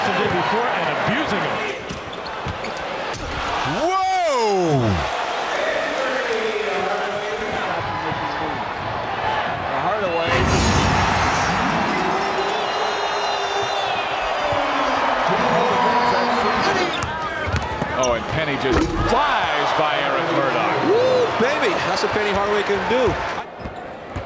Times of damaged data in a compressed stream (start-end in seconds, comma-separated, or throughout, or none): none